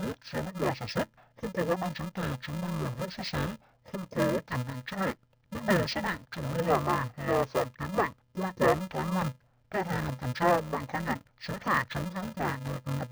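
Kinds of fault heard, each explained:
Interleaved audio read as planar: each 2.67 ms block is split and both halves play at half speed, leaving the speech dull and robotic with a 375 Hz buzz, fitting 128-sample blocks; unlike a sample-rate mismatch, the pace holds and no octave drop appears.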